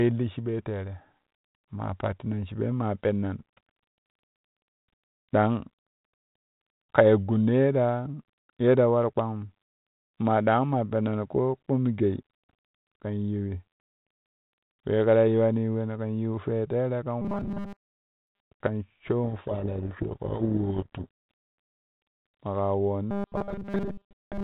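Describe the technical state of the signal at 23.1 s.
From 23.11 s to the end at 24.44 s the speech collapses into robotic sound from repeated short buffers: a rigid metallic buzz fixed at 200 Hz, likely from a 5 ms stretch replayed for most of the span while fresh audio is skipped. Unlike the telephone-band G.726 coding, whose damage is light, this buzz holds one unchanging pitch.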